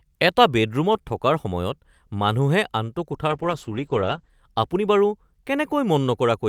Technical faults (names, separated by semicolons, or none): call bitrate drop